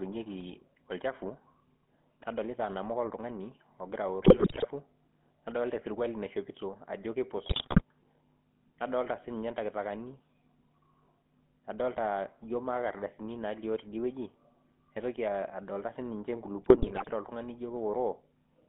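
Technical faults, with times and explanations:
Throughout: GSM full-rate codec. The speech has a buzzy, gravelly roughness. The coder models the vocal tract and drives it with a pulse train that keeps only every third excitation sample. The band runs from 150 Hz to 3.4 kHz, which fits the 13 kbps full-rate coder.
4.20 to 4.67 s, 7.46 to 7.82 s and 16.62 to 17.13 s: GSM bit errors. The speech breaks into squawks, pops and gargling. Flipped bits corrupt filter, pitch and gain values in the decoder. That bends the spectrum and throws the level about, frame by frame.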